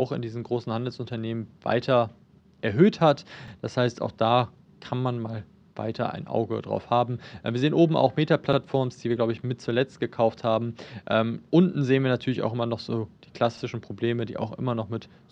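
Overlapping chunks at 3.48, 8.53 and 13.58 s: successive 5-second chunks each replay the previous chunk's last 48 ms, giving a brief stutter at every join.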